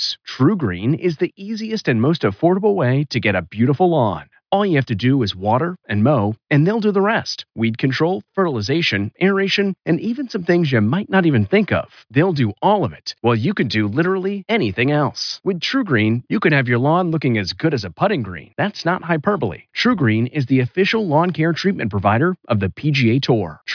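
A short speech recording, and nothing technically wrong turns up anywhere in it.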